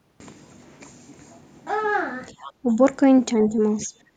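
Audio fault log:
2.39–2.45 s, 2.63–2.81 s, 3.49–3.57 s, 3.86–3.93 s: speech suppressed in double talk. The voice dips briefly at each point. The drops run from about 5 dB to about 20 dB, deepest near 3.9 s. Each lasts under a fifth of a second. This is likely an echo canceller meeting two talkers at once. It cannot tell the near voice from the loudspeaker's echo. So it pulls both down together, and the talker sinks for a moment.
2.44–2.52 s: other side's voice leaking through. A faint second voice slips in just as the first dip ends. It sits about 25 dB below the main speech, so it is quiet. It lasts under a tenth of a second. This is likely residual echo from the far side. The device plays the other party aloud, and the canceller fails to strip all of it from the microphone.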